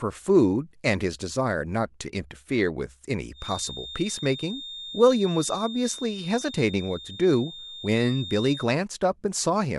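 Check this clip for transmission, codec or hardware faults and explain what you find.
One fault is present: a feedback whistle in the speech from 3.32 s to 8.71 s. A thin, steady tone at 3.6 kHz sits behind the speech throughout that span, swelling and fading slowly in level and staying roughly 15 dB below it. The likely cause is an acoustic loop from a loudspeaker back into the microphone, running with gain just at the edge of instability. That lets one frequency sustain itself without building into full howl.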